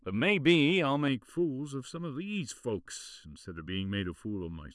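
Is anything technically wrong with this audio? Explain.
Yes, there's one problem. From 1.08 s through to the end, there's channel delay (comb filtering). One channel lags the other by a bit under a millisecond, and summing them to mono cancels evenly spaced frequencies starting around 700 Hz, so the speech turns hollow and phasey.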